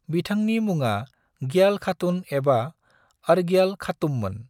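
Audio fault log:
No faults can be heard in this speech recording.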